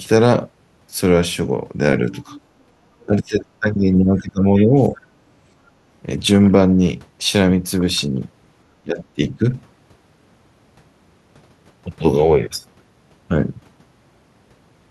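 From 2.15 to 2.41 s, the other side's voice is leaking through, likely because the echo canceller left loudspeaker sound in the microphone. A faint second voice sits about 25 dB under the speech. From 2.43 to 2.56 s, the room background is gated by the echo canceller as it clamps down, so the background dips by about 9 dB. At 3.03–3.81 s, 4.05–4.99 s and 8.82–9.45 s, the canceller likely misjudged double talk. The speech is suppressed, dipping by roughly 15 dB, and by roughly 20 dB in the last stretch. A brief scrap of the other voice also leaks through at 4.58–4.65 s.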